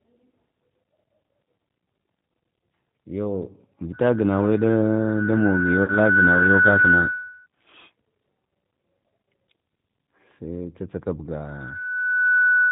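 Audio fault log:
Throughout: G.729 codec. The speech is band-limited with nothing above 4 kHz, and it sounds plainly rough and synthetic. The coder rebuilds each 10 ms frame from a vocal tract filter, a pitch predictor and a few pulses, which fits a low-rate 8 kbit/s G.729A stream.
3.92 to 7.47 s and 11.44 to 12.72 s: loudspeaker feedback squeal. A steady 1.5 kHz tone swells over roughly two seconds in the first run and about one second in the second. It tops out around 10 dB and 5 dB above the speech. The microphone is re-amplifying its own loudspeaker output at that frequency.
5.84 to 5.97 s: VoIP packet loss concealed by the speech codec. About 40 ms of audio is missing, consistent with two dropped packets. The decoder stretches the last pitch and filter into a buzzy tone or coloured noise that fades, and the speech stays weak briefly after it resumes.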